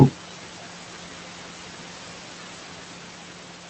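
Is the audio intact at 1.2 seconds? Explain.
No, noise suppressor artifacts run through the whole clip, including 1.2 s: steady room noise is pulled down by about 12 dB between syllables and lets back in under them, leaving a residue that shows on a spectrogram as a gated noise floor.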